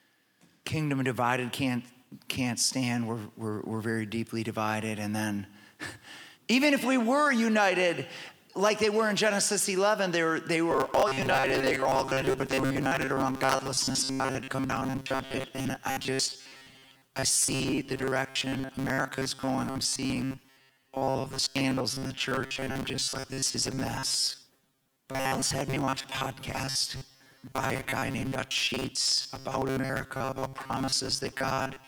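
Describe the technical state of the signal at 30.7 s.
At 30.7 s the sound is a rigid, metallic buzz pitched near 133 Hz, robotic sound from repeated short buffers, running from 10.71 s to the end. Audio likely arrives too seldom, so a roughly 7.5 ms slice is looped, replacing most of the real signal.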